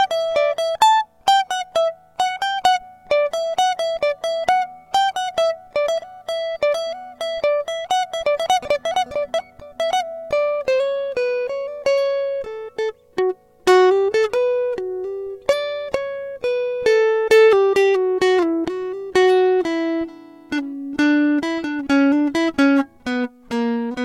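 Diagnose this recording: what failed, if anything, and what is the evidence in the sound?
Nothing in this music recording points to a failure at any stage of the chain. There is no audible event to diagnose and no evidence of a fault in the sound.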